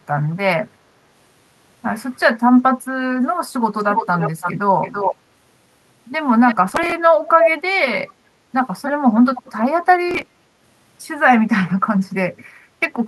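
From 3.78 to 4.53 s, then 4.82 to 5.16 s and 6.46 to 6.55 s, there's an echo leak: a copy of the speech trailing about 334 ms behind, fairly strong at first, then weaker. It's likely a speakerphone whose echo canceller let its own playback slip back into the call.

From 6.69 to 6.92 s, processor overload crackle tears across the sound. Dozens of tiny slices just vanish in a row, leaving hard-edged gaps that add up to a gritty burst. The spacing fits buffers of around 5 ms that weren't finished on time.

The echo comes back at 7.27 to 7.50 s, about as loud as the speech itself. It then shows up as faint scraps at 8.86 to 8.92 s and 9.35 to 9.43 s, with the delay now about 309 ms.

A second, shorter crackle burst hits from 10.09 to 10.28 s, with the same skipped-buffer grit.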